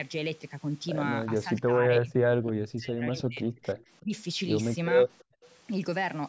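From 1.29 to 4.13 s the speech repeatedly sinks or breaks off, likely speech suppressed in double talk. The canceller mistook overlapping talk for echo, cutting up to roughly 35 dB, seen as faded spectrogram patches. At 3.79 to 3.84 s and 5.18 to 5.24 s, brief echo leak scraps return the voice 333 ms late and very faint. They are likely uncancelled loudspeaker pickup, showing as weak, smeared traces. From 5.37 to 5.43 s the background is gated by the echo canceller, dropping about 40 dB for 70 ms, a near-silent notch in the waveform's noise floor.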